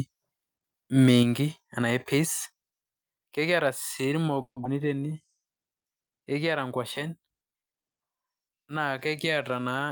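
The microphone input was likely set too high, so from 0.99 to 1.23 s the peaks run about 3 dB past the converter's limit. With a few percent of samples flattened, the loudest moments take on a harsh, crackling edge; this is microphone overload.

Call software likely reacted by stepping the microphone volume down, cutting the input gain by about 4 dB at 1.23 s and about 2 dB at 2.25 s. Each time, the speech and background drop suddenly in level.

Delayed packets likely emptied the jitter buffer, producing a call audio freeze from 4.41 to 4.58 s. The receiver stretches the last sound for 150 ms, fading to about 80 ms of silence. Speech then resumes where it left off, with nothing lost.

Soon after, at 4.64 to 4.67 s, a stretch of around 70 ms was discarded while later audio was already queued. Playback skips ahead, splicing the two sides together almost directly.

From 4.82 to 5.28 s, a jitter buffer slow-down builds reserve by repeating pitch periods, adding 86 ms. 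Speech plays at 83% speed with unchanged pitch and sounds drawn out.

From 9.50 to 9.90 s, a jitter buffer speed-up trims excess delay, removing about 50 ms of pitch periods. Speech runs at 112% speed at the same pitch and sounds hurried.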